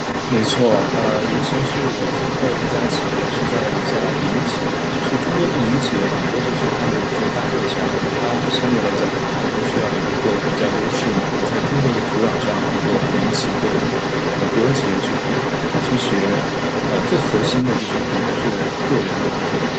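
Across the whole clip, the echo canceller likely missed the loudspeaker playback, so the other side's voice leaks through at roughly the same level as the main speech.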